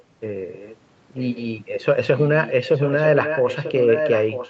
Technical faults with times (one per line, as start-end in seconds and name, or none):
0.49-0.77 echo leak
1.17-1.43 echo leak
2.17-4.49 echo leak